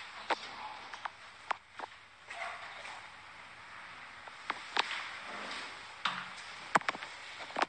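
From start to finish the treble stops abruptly near 11 kHz. Quiet detail flickers in and out, giving a watery, swirling texture, and transients smear. The likely cause is MP3 compression, with damage that fits a low bitrate around 48 kbps.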